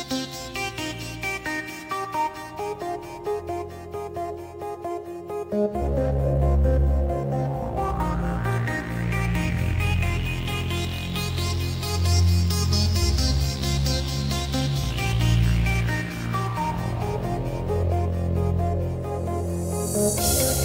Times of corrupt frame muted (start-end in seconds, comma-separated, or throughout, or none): none